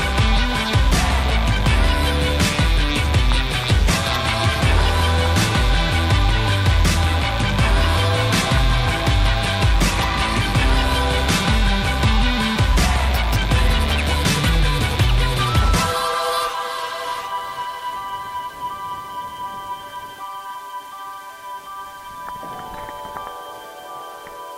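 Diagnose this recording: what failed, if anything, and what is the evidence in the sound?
Sample-format conversion: grainy distortion that tracks the sound throughout, about 30 dB down, likely from rounding to 7 bits without dither; the waveform shows visible stair-steps.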